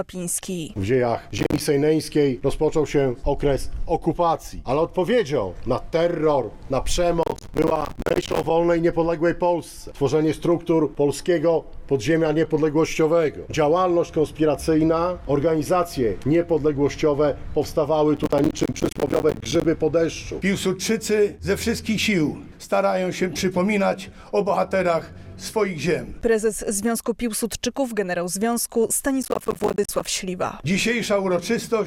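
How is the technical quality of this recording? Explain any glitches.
The recording has four bursts of processor overload crackle, at 1.38–1.60 s, 7.23–8.50 s, 18.17–19.65 s and 29.23–30.05 s. The processor repeatedly missed its deadlines for short buffers, consistent with buffers of around 10 ms. Each missed buffer became a brief hard-edged silence, and the rapid chain of these gaps sounds like gritty, tearing crackle.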